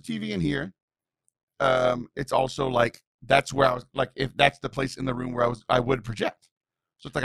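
Throughout the speech, overlap-add ripple pumps the level about 11 dB roughly a hundred times a second, a metallic robotic buzz locked to the frame rate, steadier than random dropouts.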